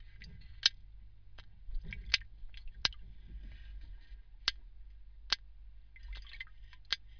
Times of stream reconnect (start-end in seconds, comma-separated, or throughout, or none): none